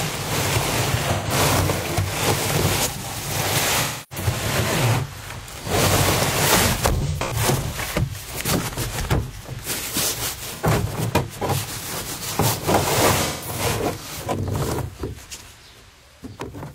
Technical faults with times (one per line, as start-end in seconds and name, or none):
1.12-1.32 AAC frame loss with concealment
3.81-4.26 AAC frame loss with concealment
6.97-7.37 AAC frame loss with concealment
10.55-10.66 AAC frame loss with concealment
13.24-13.60 AAC frame loss with concealment